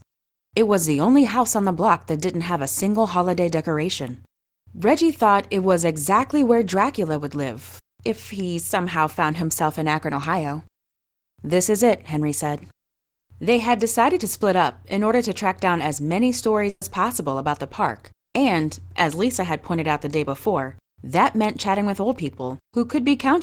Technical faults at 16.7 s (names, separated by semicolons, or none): burst of packet loss